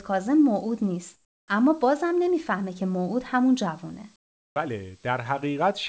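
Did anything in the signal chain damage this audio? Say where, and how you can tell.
Yes. Comfort noise in place of the background appears in two pauses, 1.14 to 1.48 s and 4.16 to 4.56 s, a call-processing stage. The real room tone, about 40 dB and about 47 dB below the loud parts, gives way to a flat, featureless hiss. In the first gap it drops about 11 dB and in the second it holds the same level. The likely cause is discontinuous transmission, with the receiver synthesising noise while the sender stayed silent on the G.722 call path, which shows no content above 8 kHz.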